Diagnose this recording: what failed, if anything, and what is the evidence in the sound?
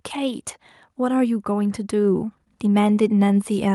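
The fault is automatic gain rising, in the call-processing stage. From about 0.98 s to the end of the clip at 3.74 s, the speech and the background noise beneath it grow louder together and steadily. The AGC judged the input level too low and stepped its gain up gradually over those final few seconds. Because it applies a single gain to the whole signal, the noise floor rises in step with the voice.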